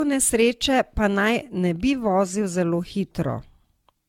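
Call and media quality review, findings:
Generation loss, throughout the speech. Swirly, smeared, hollow texture. Consonant attacks blurred. Nothing above 17 kHz. Likely repeated re-encoding, around ten passes, fits AAC-LC at 96 kbit/s. Each pass re-quantises on a shifted grid, stacking noise and holes.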